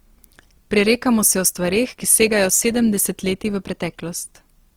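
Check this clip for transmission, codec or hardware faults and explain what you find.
One codec fault runs through the whole clip. The speech sounds rough and grainy, with a noisy texture. It swirls less than MP3 would, and the full bandwidth is kept. The likely cause is Opus compression in its CELT music mode. At a rate that fits about 24 kbps, the encoder keeps each band's energy but can't afford the fine detail, so it fills bands with folded or noise-like content. That substitution is what makes the voice sound coarse.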